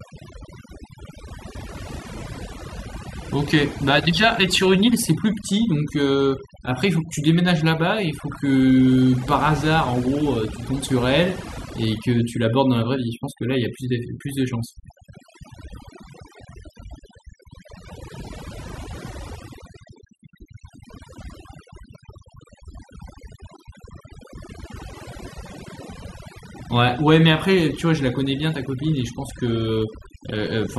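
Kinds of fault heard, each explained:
Overdone noise removal: a noise reduction stage set too aggressively runs through the whole speech recording, pushing individual frequency bands down or off wherever they sit close to its noise estimate. The background drops and breaks up into twinkling specks, and quieter parts of the voice are carved away. Unlike a noise gate, which shuts everything at once between phrases, this removes narrow bands independently, even mid-word.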